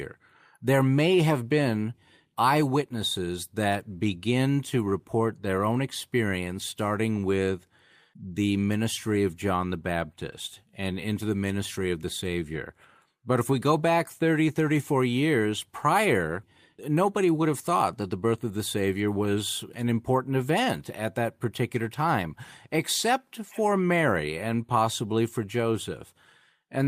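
No technical faults can be heard anywhere in this recording.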